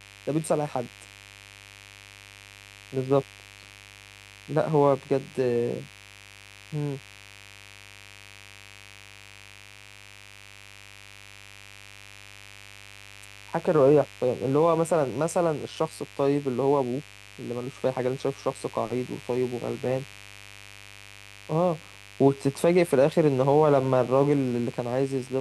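Mains buzz runs throughout this speech recording, a steady, raspy buzz sitting roughly 25 dB below the speech. It comes from sharp switching spikes, of the kind a dimmer, a rectifier or a missing shield lets in, entering the signal path twice in every cycle of the 50 Hz mains supply. Because those spikes are so abrupt, their harmonics climb well above the 50 Hz fundamental into the kilohertz range, which gives the buzz its edgy, rasping character.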